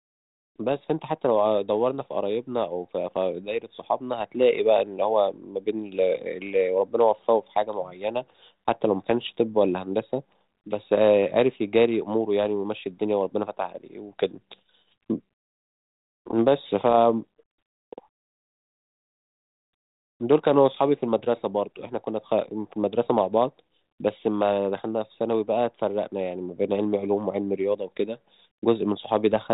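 At about 16.90 to 16.95 s there's a short burst of bit errors on an ADPCM link: pops and a rough, wobbly patch. Flipped bits knock the decoder's step size and predictor off course, so the damage rings on briefly before settling. The light G.726 ADPCM sound around it fits a 32 kbit/s link.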